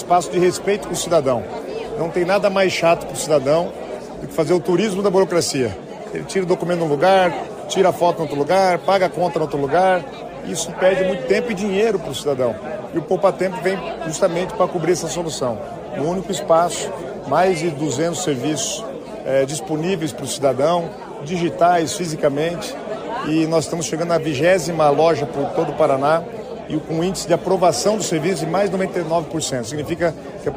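No technical faults can be heard anywhere in the audio.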